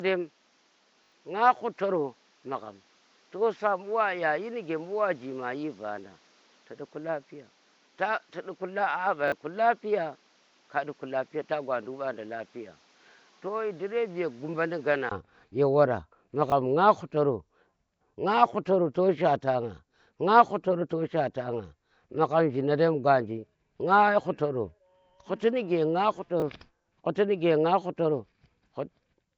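Throughout, the audio has most likely passed through Nellymoser compression, the Flash-era microphone codec, at 32 kbps. It codes short blocks on a fixed, tight bit budget, leaving weak bands empty and filling them with noise. Nothing survives above 7.7 kHz, and the damage is plainly audible: a rough, hissy halo around the speech and a smeared, underwater texture.

From the start until about 15.1 s, the recording was likely made on a poorer input device, with the system switching to the better one at that point. While the poorer input is in use, the band stops at 7.6 kHz, the level sits about 5 dB lower, and a background noise of its own runs some way under the speech. At the switch there is a gap of about 20 ms, after which the sound opens up and the level rises.

Inside that first stretch, a repeated buffer occurs at 1.04 s, where fresh audio arrived late and the device replayed the last block four extra times through 1.12 s. 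The repeats come at a spacing that fits a 20 ms buffer, so they sound like a short buzzing stutter with hard joins, and roughly 70 ms of speech is lost. A second repeat at 9.28 s plays the block twice more, losing about 40 ms.

After the switch, the same fault returns twice. At 16.5 s and again at 26.4 s, a single extra play causes a brief click-like hitch, each costing about 20 ms of audio.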